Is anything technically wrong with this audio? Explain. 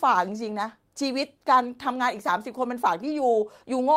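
Yes. A lost packet rebuilt from error correction occurs between 3.07 and 3.17 s. The following packets carried low-bitrate backup copies, which the decoder played instead of leaving a gap. About 60 ms, which fits three lost packets, sounds rougher and noisier.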